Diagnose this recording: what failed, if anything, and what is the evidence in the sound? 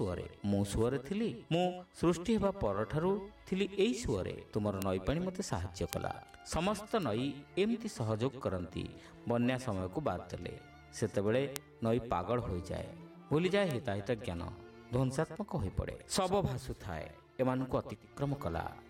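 Bit error spikes: flipped bits in storage or on a digital link jump samples by a power of two, causing isolated broadband ticks at 4.82, 5.93, 7.03, 11.56 and 13.71 s.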